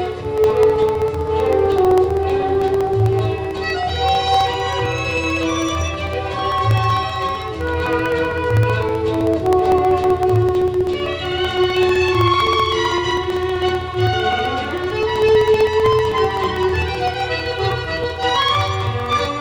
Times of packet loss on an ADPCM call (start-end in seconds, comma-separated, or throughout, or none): none